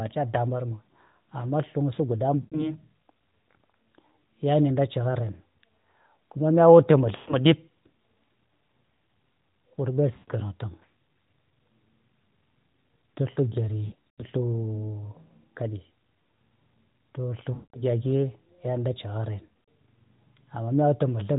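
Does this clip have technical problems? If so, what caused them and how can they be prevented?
Yes, there are lost AMR speech frames at 2.42–2.72, 7.16–7.35, 10.14–10.30, 13.86–14.25, 17.54–17.83 and 19.49–19.64 s. Radio errors corrupted frames, so the decoder kept repeating the last good pitch and vocal tract settings at falling gain. That's the smeared, fading warble, and the speech comes back rough. The gaps at 13.86 and 19.49 s are broken up. To prevent it, improve radio coverage or use a more robust AMR mode with stronger error protection.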